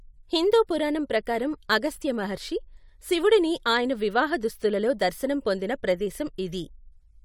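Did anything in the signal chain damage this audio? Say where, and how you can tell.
No, nothing I can hear in this speech points to damage at any stage of the chain.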